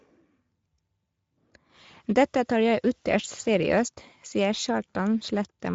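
The speech runs through the Speex codec for the whole clip, at a rate that points to a middle mode near 16.8 kbps. Too few excitation bits leave the voice noisy and hoarse, and above 4 kHz there is only shaped noise-like fill, with nothing above 7.6 kHz.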